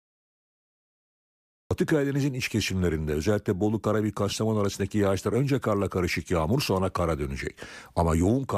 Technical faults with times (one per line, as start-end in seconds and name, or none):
0.00-1.71 cut-off start